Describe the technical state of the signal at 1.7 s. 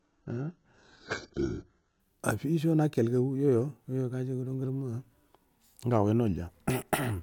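At 1.7 s the speech is still in the adaptive stream's low-bitrate start, which runs from 0.0 to 2.0 s. The player began on a cheap version, and the sound points to about 8 kbit/s: nothing above 7.9 kHz, coarse codec artefacts, then a sudden, gapless step up.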